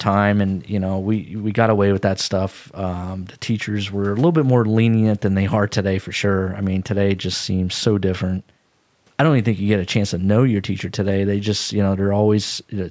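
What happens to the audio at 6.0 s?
Nothing goes wrong at 6.0 s: the speech is intact there, with only the ordinary call microphone processing and a low level of room noise, about 44 dB below the speech, in the background.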